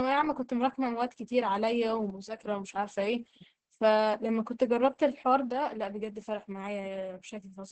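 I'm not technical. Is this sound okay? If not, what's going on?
No. The whole recording has heavy Opus voice compression. The speech was squeezed hard to save space. The voice sounds muffled and hoarse, a little robotic, and the crisp high sounds are missing. This happens all the way through.

There are also two sudden drops in loudness. One runs from 2.10 to 2.39 s. The other starts at 5.51 s and lasts to the end. The likely cause is that one channel drops out, so half the sound is lost.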